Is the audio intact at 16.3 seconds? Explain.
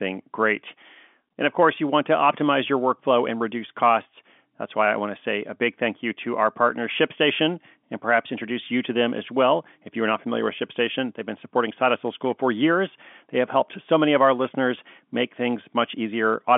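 Yes, the speech at 16.3 seconds is intact, carried cleanly through G.711 telephone coding, with the sound confined to the narrow telephone band and nothing heard above about 3.5 kHz.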